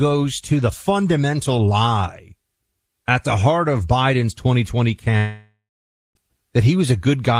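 A long network dropout hits this speech clip from 5.17 to 6.17 s, likely from a stretch of lost packets. The last sound is carried on as a fading buzz, then about 0.54 s of silence follows, and speech resumes with roughly 0.98 s missing.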